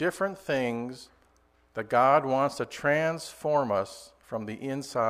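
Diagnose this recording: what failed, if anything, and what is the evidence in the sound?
Nothing here points to a failure at any stage, so there's nothing to diagnose and no evidence of a fault to report.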